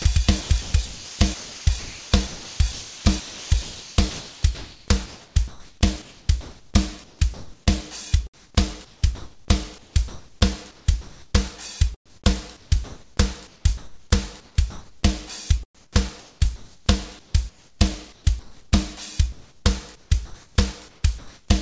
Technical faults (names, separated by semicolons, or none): sound chopped by the voice detector; comfort noise in place of the background